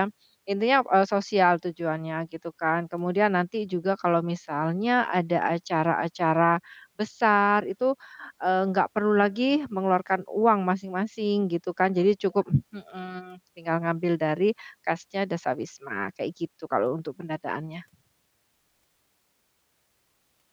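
No audible faults in this recording.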